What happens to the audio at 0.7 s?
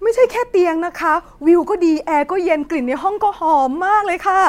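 Nothing goes wrong at 0.7 s; the speech there plays through intact, with no dropout, click or distortion.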